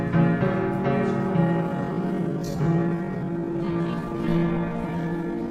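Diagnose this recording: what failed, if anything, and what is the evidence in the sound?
A time-stretched section starts at 1.43 s and runs to the end of the clip at 5.51 s. The pace drops abruptly to about 0.59 of normal speed while the pitch holds steady, and the stretched material drags. The likely cause is a pitch-preserving stretch applied in software at the processing or playback stage. It lengthened the audio by repeating short overlapping segments.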